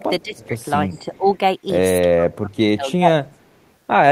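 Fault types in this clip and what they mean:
Echo leak: A faint, delayed copy of the speech comes back into the signal. It trails the original by 348 ms. It is very quiet, about 35 dB below the speech, and about 40 dB below in the last case. It appears from 0.22 to 0.47 s, 0.91 to 1.17 s and 3.31 to 3.71 s. The likely cause is a far-end loudspeaker whose echo canceller did not fully remove what its microphone picked up.
Speech suppressed in double talk: The speech level dips while the other side is also talking. The dips come at 0.23 to 0.55 s and 0.87 to 1.26 s, dropping roughly 15 dB and 10 dB. The longest comes at 2.15 to 3.44 s, reaching about 25 dB down over roughly one second. This is likely an echo canceller that could not tell the talker from the loudspeaker echo. It turned both down together.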